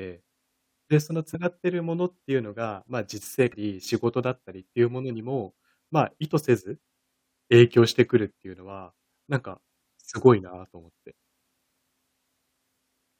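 At 1.34 s, and again from 3.52 to 3.54 s, the speech is broken by brief blips caused by damaged data in a compressed stream. Corrupted bytes leave the decoder misreading frames until it regains sync at a later header, producing a short disruption instead of clean audio. On a spectrogram each appears as a narrow vertical disturbance, and the waveform shows a short break in the surrounding speech envelope.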